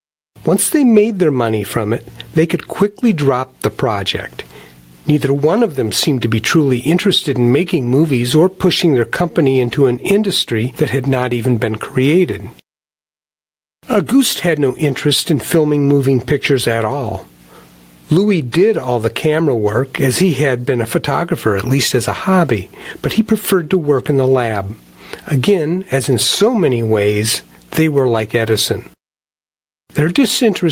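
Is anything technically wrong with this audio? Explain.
Yes, there is gain pumping throughout: a fast limiter is likely clamping gain set far too high, so the gain swings about 15 dB, pulling down under loud speech.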